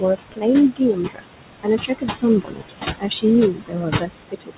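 Throughout, noise suppressor artifacts are present: the steady room noise, only about 7 dB below the speech, is pulled down by about 19 dB in the gaps and swells back under each phrase. This pumping follows the speech, unlike constant hiss.

Speech cut by the noise suppressor occurs at 0.0–0.45 s, 0.76–1.4 s, 1.62–2.24 s, 2.41–2.71 s, 2.99–3.25 s and 3.52–4.57 s. The suppressor mistook soft speech for noise and lowered it by about 18 to 22 dB, so endings and quiet syllables sound swallowed rather than dropping out abruptly like lost packets. Nothing above 4 kHz is heard, which fits a narrowband telephone codec.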